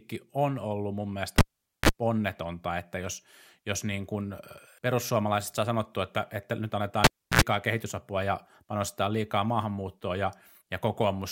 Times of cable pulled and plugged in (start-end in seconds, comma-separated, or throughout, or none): 1.38-1.89, 7.04-7.41